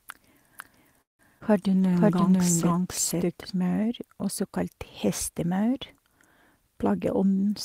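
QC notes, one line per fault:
0.00–3.50 s, doubled audio track: a second, full-band copy of the speech runs about half a second behind the original at roughly the same level, with no decay or room colour. That points to the sound being likely captured twice, once through a slower path; it stops abruptly at 3.50 s.
1.01–1.21 s, call audio freeze: the sound stalls, the last moment is stretched into a fading buzz or hiss that falls to silence for about 140 ms, then the speech resumes where it left off. Packets likely held up in transit emptied the jitter buffer, adding a 176 ms gap with nothing lost.
1.39–1.44 s, short concealed packet loss, two in a row: about 20 ms of audio each never reached the decoder, and the receiver briefly continued the preceding sound before blending back, heard as a quick smear. The second also trims about 20 ms of the earlier added delay.
1.69–3.01 s, call bitrate drop: the encoder's rate fell from 32 to 16 kbps and stayed at the lowest level for about 1.2 s after a falling bandwidth estimate. 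The coarser coding makes the speech rougher and muffled, with the top end thinned, until the rate recovers.
6.89–7.51 s, jitter buffer speed-up: the speech runs about 15% fast at unchanged pitch, sounding hurried. With excess audio queued, the receiver cut short pitch-period pieces repeatedly, removing roughly a tenth of a second to bring the buffer delay back down.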